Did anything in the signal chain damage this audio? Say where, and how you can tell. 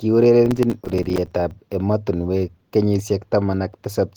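Yes, processor overload crackle at the driver/buffer stage: from 0.46 to 1.51 s, a few dozen tiny hard-edged dropouts to silence, consistent with short buffers missing their deadlines.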